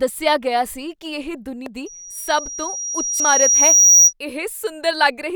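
At 1.66 s, just after "ਕੀ ਇਹ", compressed frames are skipped: about 150 ms of speech is lost, which fits two frames of roughly 85 ms. It shows as a discontinuity in the waveform. The same jump recurs at 3.20 s.

From 1.86 s to 4.13 s, loudspeaker feedback squeal builds over about two seconds into a 5.8 kHz tone, ending some 15 dB above the speech. On a spectrogram it is a bright horizontal line.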